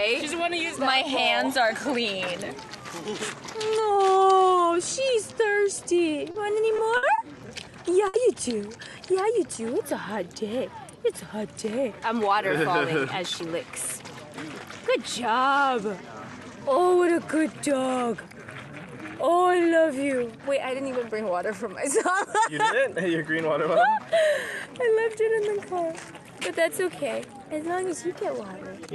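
The audio passes through a WebRTC call path, with Opus coding that cuts off content above about 12 kHz at a rate consistent with roughly 64 kbps. Between 6.31 and 7.21 s there are repeated stalls (stutter): four times the jitter buffer ran empty because packets arrived late, and the receiver stretched the last sound for 140 ms in total, the longest wait 60 ms, about 16% of that stretch. Nothing is lost, so the audio drags and picks up where it stopped. That is what separates it from the burst of packet loss at 8.08 to 8.17 s, where 60 ms of concealment is followed by a jump forward that skips 60 ms of audio. At 11.77 to 12.20 s a jitter buffer speed-up removes about 40 ms in pitch-period slices to shed excess delay, so the sound runs hurried at 107% speed while keeping its pitch, unlike a playback-rate change.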